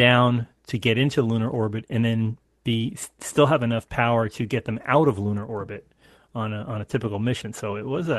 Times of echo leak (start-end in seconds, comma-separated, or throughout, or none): none